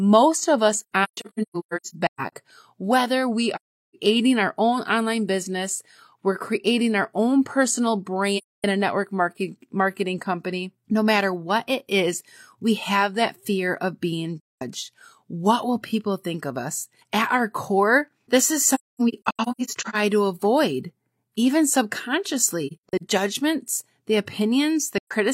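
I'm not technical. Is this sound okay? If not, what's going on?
No. The speech keeps dropping into soft silences, at 0.80–2.32, 3.55–3.95, 8.36–8.64, 14.40–14.62, 18.74–19.95, 22.67–23.02 and 24.98–25.12 seconds, each fading out and back. This is AAC frame loss with muting: chunks of compressed audio went missing, and the player filled each gap with silence.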